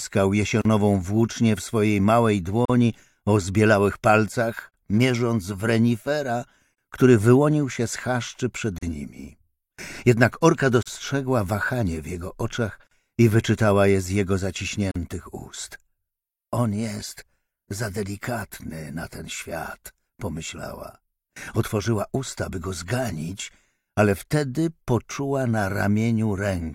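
At 0.62 s the audio drops into a silence of 37 ms, then continues from where it stopped. Further dropouts of 43 ms follow at 2.65, 4.70, 6.74, 8.78, 10.83, 12.87 and 14.91 s, one every 2.0 s. This is a gap at a join of encoded pieces: each 2-second segment was encoded separately and joined untrimmed, so encoder start delay and last-frame padding remain as silence, with edges smeared by the codec.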